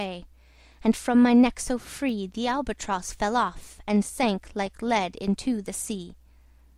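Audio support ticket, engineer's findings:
Sharp isolated snap at 2.09 s, sitting on top of the programme rather than replacing it, peaking at roughly -30 dBFS. Electrical switching spike, likely from a nearby switch, motor or static discharge arcing briefly and coupling into the audio line.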